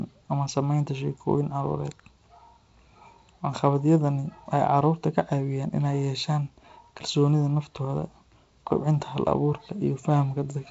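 Nothing stood out on listening to this speech, which comes through G.722 wideband telephone coding at 48 kbit/s with nothing above 7.7 kHz.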